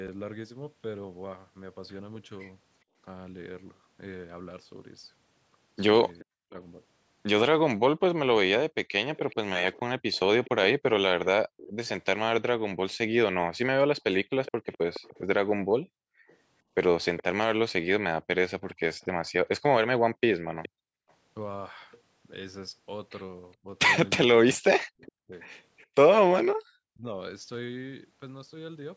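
At 2.84 to 2.96 s the background is gated by the echo canceller: while the far-end loudspeaker plays, the canceller clamps the microphone, so the room tone dips by about 24 dB for roughly a tenth of a second before recovering.

From 6.19 to 21.12 s there is an echo leak: a faint copy of the speech trails 419 ms behind, around 20 dB below the main signal. This is likely residual loudspeaker pickup the canceller failed to subtract.

At 6.40 to 6.56 s the speech is suppressed in double talk. With both ends active, the canceller likely mistook the local talker for echo and attenuated everything, producing a sharp dropout of about 40 dB lasting roughly 150 ms.

The background gating recurs at 14.52 to 14.65 s and again at 20.42 to 21.08 s, each time pulling the room sound down by about 40 dB; the second gate removes roughly half a second in total.

From 23.62 to 27.13 s the double-talk suppression returns, chopping the speech in pieces that add up to about a second, with dips near 40 dB. 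Inside that span, 24.55 to 25.12 s, the 419 ms echo leaks through again, about 25 dB down.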